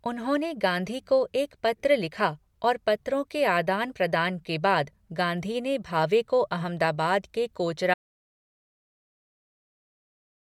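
Speech that runs normally until about 7.94 s, then hits an audio dropout to silence that lasts right to the end. The gap is silent with no room tone underneath, so the input was likely lost, through a disconnected device, a failed link or a stray mute, while the recorder kept writing.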